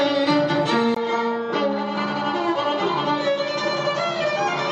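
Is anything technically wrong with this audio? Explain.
Yes. From 0.95 s to the end, after a 20 ms gap, the sound turns duller, nothing above 7.6 kHz, about 5 dB quieter, with faint new background noise, likely an input switched to a poorer device.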